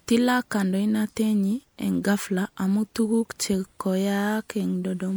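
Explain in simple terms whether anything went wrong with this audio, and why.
A short glitch cuts into the speech from 2.18 to 2.21 s: a corrupt frame decoded, where damaged compressed data from a couple of frames was played anyway.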